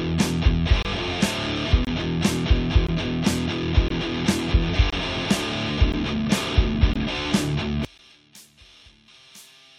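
The sound is interrupted by short, hard-edged silences at 0.83, 1.85, 2.87, 3.88, 4.90, 5.92, 6.94 and 7.98 s. Each lasts between about 12 and 24 ms. They arrive almost exactly once per second. That regular spacing points to a gap between stream segments, with one-second segments whose time stamps leave a small hole. The player fills each hole with silence. Nothing is lost from the sound itself. From 7.85 s to the end, the level drops by about 28 dB and only a faint residue remains. This collapse is typical of one channel inverted. The likely cause is reversed polarity on one stereo channel, so the material common to both channels cancels when they are summed to mono.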